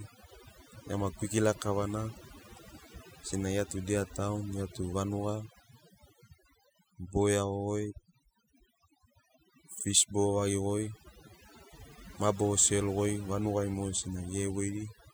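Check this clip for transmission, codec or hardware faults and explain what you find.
One fault runs through the whole clip: overdone noise removal. A noise reduction stage was set far too aggressively, so any frequency band sitting close to its noise estimate gets pushed down hard or switched off entirely, and the softer parts of the speech are caught along with the noise. As a result, the background in the pauses drops and breaks up into twinkling specks.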